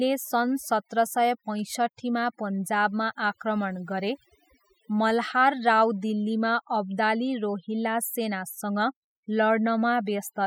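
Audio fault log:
throughout, overdone noise removal: the noise reduction is set far too hard, so any frequency band that sits close to the tool's picture of the noise floor is pulled right down or switched off, and the quieter parts of the speech fall under that threshold along with the noise. The gaps between phrases drop away with scattered twinkling specks where isolated bands flicker on and off.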